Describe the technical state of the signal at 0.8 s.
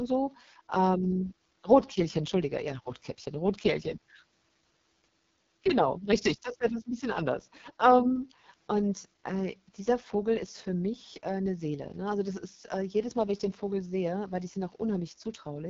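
At 0.8 s the speech is passing through an AMR wideband (HD Voice) codec, present throughout. Its rough, raspy texture and nothing above 7.3 kHz point to a 6.6 kbit/s mode, starving its vocal-tract model.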